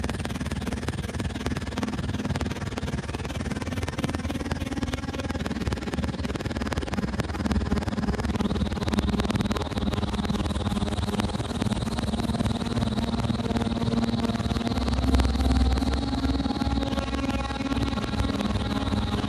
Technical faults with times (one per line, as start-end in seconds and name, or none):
none